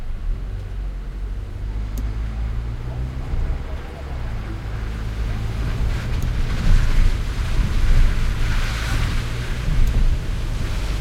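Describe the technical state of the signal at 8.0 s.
At 8.0 s the signal is intact, with no technical fault present at that moment.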